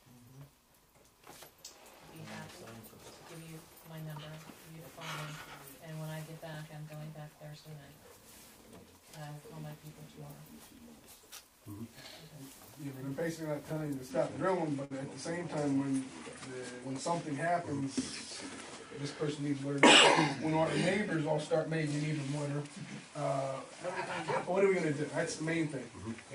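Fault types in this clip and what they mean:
Short stall from a late packet: a packet turned up late, the jitter buffer ran dry, and the last bit of sound got stretched until it arrived. Nothing's lost. You hear a held moment of about 19 ms at 13.73 s and about 57 ms at 14.85 s.
Input switched to a poorer device: from 14.11 s to the end, the sound changes character, likely because the input moved to a lesser microphone or a headset's call profile. Nothing above 10.5 kHz survives, the level shifts by around 5 dB, and new noise sits roughly 45 dB down, with no gap at the switch.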